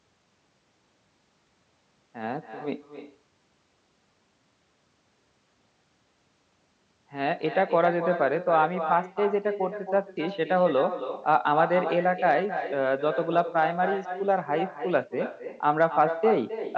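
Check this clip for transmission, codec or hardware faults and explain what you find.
One transmission fault runs through the whole clip: echo with no canceller. The far end's loudspeaker plays the call back into its own microphone, and nothing subtracts it. After the network round trip, every phrase returns roughly 300 ms later as a copy about 9 dB quieter and thinner, trailing the speech like a shadow. The top end stopping at 8 kHz comes from the call microphone processing and is not a fault.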